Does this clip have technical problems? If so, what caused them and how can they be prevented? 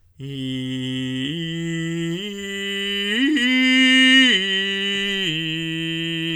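No, nothing in this music stood out as a technical problem on listening, so there is nothing here that needs preventing.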